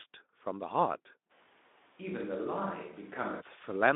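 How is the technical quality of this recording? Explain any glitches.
One fault stands out: a temporary drop to a distant-sounding pickup in the middle of the clip, heard through a narrow telephone-style band of roughly 200 Hz to 3.6 kHz with nothing above 3.8 kHz and only light Speex codec coloration.

From 1.32 s to 3.40 s the sound switches to a distant microphone, likely because the close microphone's feed dropped out and a farther one took over. The speech abruptly turns roomy and hollow, thinner in the low end, and falls about 5 dB in level. Room noise rises to about 25 dB below the speech. At 3.40 s the close, dry sound returns just as suddenly.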